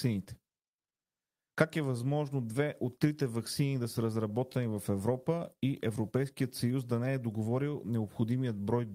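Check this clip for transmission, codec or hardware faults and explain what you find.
Two related faults run through the clip, both caused by mismatched clocks.

Clock drift between sender and receiver: throughout, the sender's clock runs about 5% slow, so the receiver's jitter buffer keeps draining and small timing hiccups recur at uneven intervals.

Repeated timing corrections: from 0.08 to 8.86 s, the receiver keeps repeating short pieces to stay in step. This stretches the speech to 96% speed, adding around 0.4 s.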